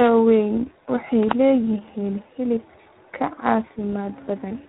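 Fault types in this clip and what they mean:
Tandem speech coding: the speech passes through two speech coders in sequence, likely a low-rate iLBC-type coder and then G.726 ADPCM, the second re-encoding the first's errors, so the speech sounds rough, muffled and warbly, with nothing above 3.9 kHz.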